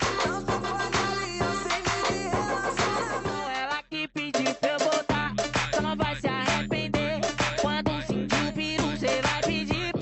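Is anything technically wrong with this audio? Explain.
No, nothing is technically wrong: the audio has come over a WebRTC call path, and its top end stopping at about 8 kHz, which fits an Opus codec set to that bandwidth, is that path's normal behaviour rather than a defect.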